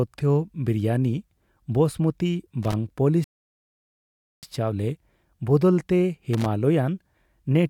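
At 2.63 s there's a short burst of loose connector crackle lasting about a tenth of a second, to 2.74 s. That's a worn or dirty contact somewhere in the chain making and breaking as it shifts, so the speech gets chopped into ragged fragments and you hear a scratchy, irregular crackle instead of clean sound. The same thing comes back from 6.33 s to 6.46 s, again roughly a tenth of a second of scratching before it settles.

In between, at 3.24 s, the speech just stops dead and sits in silence until 4.43 s. That's a rebuffering stall: the player used up the audio it had downloaded and had to wait for more before carrying on. When it picks up again it continues from exactly where it left off, so nothing goes missing, but about 1.19 s of dead air gets added to the timeline.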